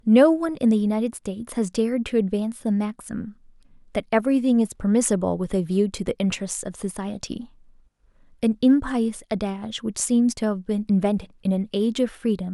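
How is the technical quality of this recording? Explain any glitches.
No technical faults can be heard anywhere in the recording.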